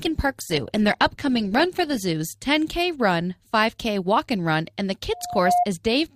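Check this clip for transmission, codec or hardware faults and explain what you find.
Two faults are audible in the speech.

From 0.0 to 2.0 s the speech sounds dull and smeared, with thin or synthetic-sounding treble, then abruptly clears with no gap. This is an adaptive stream starting at a low bitrate: the player opened on a cheap version, consistent with Opus around 16 kbit/s, then switched up, which fits roughly 64 kbit/s, once the connection was measured.

From 5.12 to 5.66 s a steady 711 Hz tone swells in over a little under half a second and ends up a few dB above the speech. This is loudspeaker feedback squeal: a microphone picked up its own loudspeaker, and at that frequency the loop gain exceeded one.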